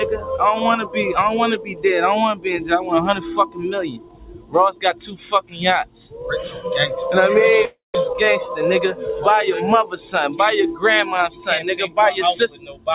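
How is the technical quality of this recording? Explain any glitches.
The recording has clear processing and transmission faults: a speech-tuned noise suppressor working on non-speech material, a dropout, and a brief slow-down, all heard through a call path whose bandwidth stops at 4 kHz.

Noise suppressor applied to music or sounds: Throughout the clip, a suppressor built for speech treats sustained material as noise and swings the level by roughly 15 dB. Attacks survive while held parts and tails sink, so the sound pumps and thins. A plain level ride wouldn't favour transients this way.

Sound cut by the noise suppressor: Specific passages sink further at 1.58–1.84 s (about 11 dB), 3.9–4.55 s, 4.71–5.62 s and 5.85–6.24 s (about 15 dB each), 6.47–6.65 s (about 9 dB), 11.29–11.47 s (about 13 dB) and 12.49–12.87 s (about 15 dB). Decays are chopped short. Unlike a dropout, some sound always remains.

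Long network dropout: From 7.65 to 7.96 s, about 300 ms of audio is lost. The receiver extends the last sound as a fading buzz, then leaves about 160 ms of near-silence. This is likely packets never arriving. Unlike suppression, the original material is gone rather than turned down.

Jitter buffer slow-down: From 8.01 to 8.47 s, playback runs at about 93% speed, adding 39 ms as the receiver repeats short periods to rebuild its reserve. The sound drags at unchanged pitch. This distinguishes it from tape-style slowing, which would also lower the pitch.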